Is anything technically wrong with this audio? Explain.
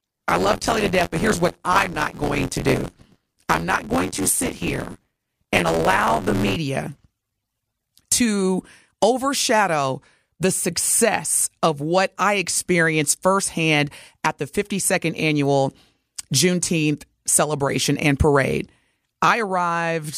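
Yes, there's buffer tearing over the first 6.56 seconds of the speech. The writer and reader of the playback ring buffer have drifted so they cross mid-period, leaving about a fifth of each chunk filled with audio from roughly 20 ms earlier, with hard splices on both sides. You hear it as a robotic rattle at about 86.1 Hz, which fits a 512-sample buffer, riding on the speech and dropping out when the signal does.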